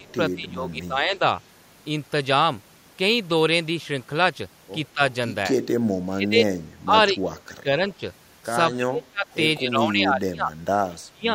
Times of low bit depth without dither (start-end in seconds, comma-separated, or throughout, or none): none